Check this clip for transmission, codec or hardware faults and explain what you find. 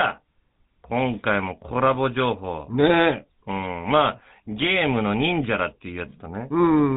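The speech carries GSM full-rate codec damage for its whole length. The codec models the vocal tract as a filter. It excites that filter with regularly spaced pulses and keeps only every third excitation sample. The rest is thrown away, so the fine detail of the voice is lost. The result is plainly audible as a buzzy, gravelly roughness. Nothing above 3.8 kHz remains, so the top end is dull. The coarse texture fits the 13 kbps full-rate mode.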